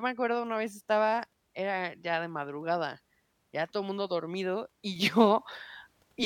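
At 4.96 s there's a sudden gain jump: the level steps up by about 6 dB in a single sample and holds there to the end. Speech and background noise rise together, so it's likely a digital gain setting applied without any ramp.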